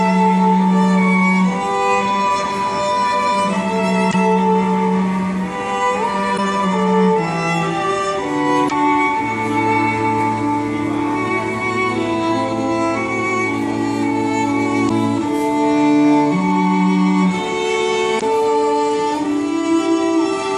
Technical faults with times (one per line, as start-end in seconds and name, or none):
4.09-4.15 damaged data in a compressed stream
6.34-6.39 damaged data in a compressed stream
8.66-8.72 damaged data in a compressed stream
14.85-14.91 damaged data in a compressed stream
18.17-18.23 damaged data in a compressed stream